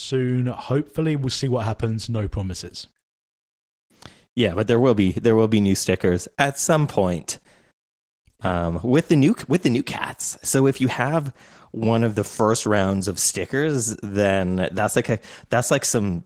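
Throughout, the speech sounds hoarse and slightly robotic, typical of Opus voice compression in hybrid mode, whose coarse excitation coding fits roughly 16 kbps.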